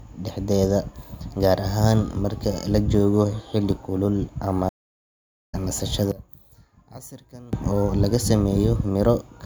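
Right after "joogo xilli kulul ama", at 4.69 s, there's a stream reconnect: the connection dropped, leaving about 0.81 s of silence until 5.55 s, and the new decoder picked up mid-stream, so the speech resumes roughly 0.7 s further on and that stretch is simply skipped.

Then from 6.12 to 7.53 s the voice nearly disappears, dropping by about 20 dB to a faint residue. That's likely one channel inverted: with one side's polarity flipped, the centred speech common to both channels cancels out when they're summed to mono.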